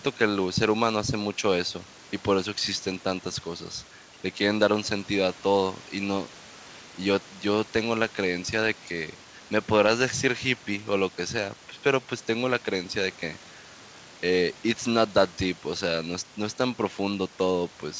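No technical faults are audible.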